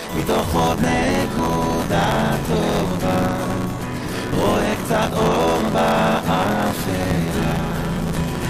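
A robotic rattle at about 86 Hz runs through the whole clip whenever sound is present, the mark of buffer tearing. The writer and reader have slipped within each period, which fits a 512-sample buffer, so roughly a third of every buffer replays audio from around 20 ms earlier, hard-joined on both sides.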